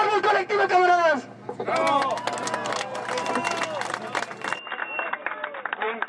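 The input likely switched to a poorer device at 4.59 s, so the audio turns dull and boxy with nothing above 3.8 kHz, gains a faint new noise floor about 40 dB down, and shows no gap or level jump.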